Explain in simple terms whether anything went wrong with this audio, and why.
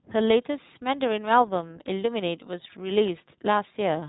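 From start to finish, the speech sounds muffled and a little rough and robotic, like a voice over an old internet phone call, with nothing above about 3.9 kHz. That is the iLBC codec, a narrowband calling codec. It chops the sound into short slices, which here fits 20 ms frames, and rebuilds each slice separately from a simplified description. That rebuilding causes the synthetic edge, and the narrow range removes the crisp high detail.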